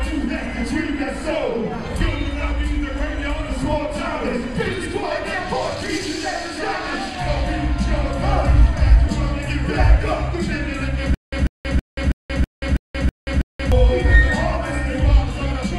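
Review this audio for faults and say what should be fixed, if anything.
Stutter with silent gaps from 11.14 to 13.72 s: a 144 ms fragment repeats eight times, each followed by about 180 ms of digital silence. Unlike plain dropouts, the same burst returns every 324 ms, likely a stalled stream replaying its last buffer. Give the player or stream enough buffering to keep it from running empty.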